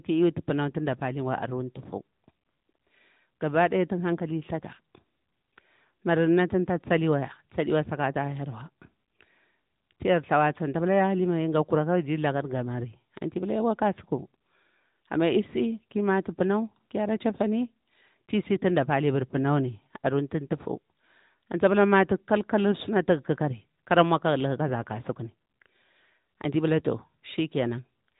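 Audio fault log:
Throughout, AMR narrowband mobile codec: the speech sounds squeezed into a phone line, with nothing above 3.8 kHz, so the sibilants lose their air and the tone gets boxy. The damage is plainly audible, a buzzy, synthetic edge, because the codec rebuilds speech from a vocal-tract model driven by a few pulses per short block. That level of artefact fits one of the middle bitrate modes, somewhere around 10 kbps.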